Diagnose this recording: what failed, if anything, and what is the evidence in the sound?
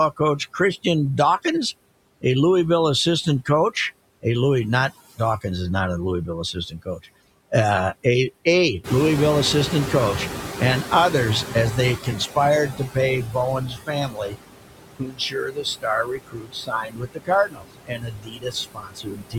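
Overdone noise removal in the call processing runs through the whole recording. The suppressor pushes bands sitting near its noise estimate almost to zero, so the background collapses to near silence flecked with twinkling specks, and the speech loses its quieter components.

Noise suppressor artifacts are also present throughout, with the noise pulled down by about 21 dB. Working band by band and frame by frame, the gain lets residual noise sink in the pauses and rise back under the speech.

Speech cut by the noise suppressor occurs at 4.9–5.45 s, 6.27–7.06 s, 12.69–14.37 s and 14.77–19.38 s, with drops of about 17, 15, 18 and 22 dB. The suppressor treats low-level speech as noise, leaving soft consonants and endings faint. The last span loses roughly three seconds.

The noise suppressor is catching up from 8.84 to 13.23 s. The room noise steps up by about 14 dB near 9 s, and the noise estimate lags behind. 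The noise passes with little reduction at first, then sinks over 4.39 s as the estimate adapts, reaching about 15 dB of cut.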